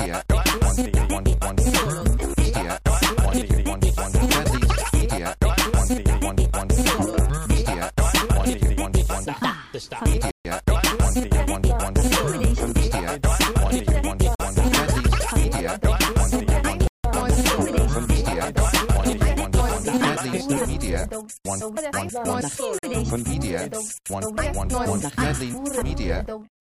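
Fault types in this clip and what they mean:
Block of digital silence: the sound drops abruptly to silence, as when the output buffer is not filled in time. There are four holes. Two last 46 ms, which fits a 2048-sample buffer. Two others last 139 ms and 169 ms.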